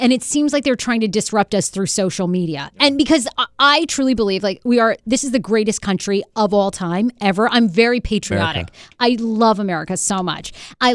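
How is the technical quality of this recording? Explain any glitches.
No technical faults can be heard anywhere in the recording, so there are no glitches to explain.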